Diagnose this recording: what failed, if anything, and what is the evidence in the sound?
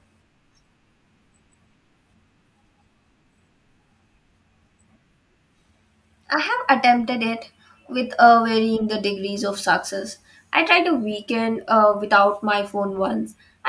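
Nothing failed: no stage in the chain, from capture through to playback, leaves any audible mark on this speech recording.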